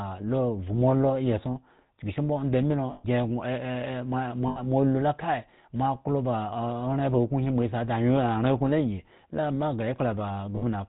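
A speech recording carrying plainly audible GSM full-rate codec damage throughout: a buzzy, gravelly roughness and nothing above 4 kHz, which fits the 13 kbit/s full-rate coder rather than simple band-limiting. Lost GSM frames occur at 2.92–3.05 s, 4.48–4.60 s and 10.56–10.64 s, lasting about 120, 80 and 60 ms. Each is filled by the last good frame repeated, so it sounds like a brief metallic ring rather than a silent dropout.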